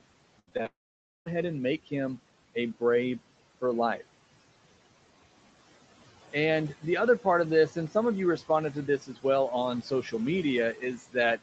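Throughout, noise suppressor artifacts: the background drops by about 17 dB between phrases and swells under them, seen as blotchy, flickering low-level noise on a spectrogram.

From 0.39 to 0.66 s comes repeated packet loss with a robotic sound: four short holes, the longest 76 ms, patched by stretching the previous sound, so almost half the span is synthetic. The waveform looks choppy and the spectrogram shows smeared, repeated harmonic bands.

From 0.66 to 1.28 s a long network dropout, likely from lost packets, leaves a fading buzz or hiss, then about 0.53 s of near silence, a flat gap in the waveform, before "and make him a".

Speech cut by the noise suppressor follows three times, each affecting roughly a tenth to a sixth of a second. At 9.01 to 9.24 s, after "of you responded to", the drop is about 15 dB. At 9.82 to 10.13 s it is about 10 dB, and at 10.74 to 11.15 s about 17 dB. The speech sounds swallowed, and the spectrogram shows speech energy abruptly thinned into dark notches.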